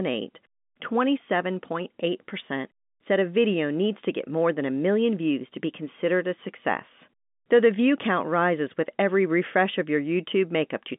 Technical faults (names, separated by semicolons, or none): none